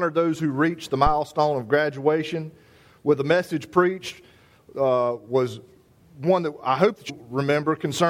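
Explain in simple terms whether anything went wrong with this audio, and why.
Two brief glitches, at 0.35 s and 7.08 s, come from damaged data in a compressed stream. Part of the file was corrupted, so the player briefly decoded garbage before finding its place again.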